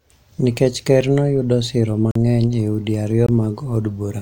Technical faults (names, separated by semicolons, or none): block of digital silence